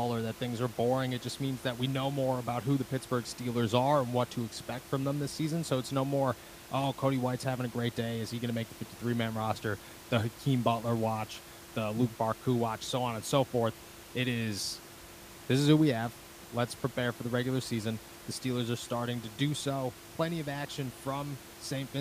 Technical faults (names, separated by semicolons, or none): none